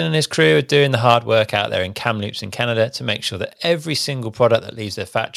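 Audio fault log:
1.08–1.14 s, microphone overload. Right after "crew are doing the", the loudest moment flattens and crackles, with peaks pushed about 3 dB past the limit. A small share of samples is affected. The likely cause is an input level set too high, so the converter cut the wave tops.
1.14 s, microphone volume stepped down. Immediately after that distorted peak, the whole sound drops by about 3 dB in one step, before "work out there in". Background and speech fall together. This likely reflects call software reducing the microphone's input volume after detecting overload.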